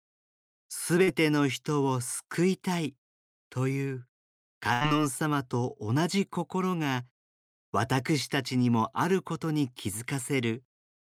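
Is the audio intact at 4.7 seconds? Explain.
No. At 4.73 s a burst of packet loss begins and runs to about 4.83 s. Several consecutive packets never arrived in time, so the receiver stretched the last received sound across roughly 76 ms while fading it down, then resumed with about 80 ms of speech skipped. What sets it apart from a plain dropout is that the gap is not silent: you hear a smeared, decaying continuation of the preceding sound, then an abrupt jump forward.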